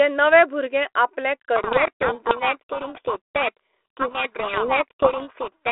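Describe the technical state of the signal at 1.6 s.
At 1.6 s you're inside a codec payload misread running from 1.56 s, right after "भुरगे आपलें", to the end: G.726 code words decoded in the wrong bit order, burying speech in harsh distortion.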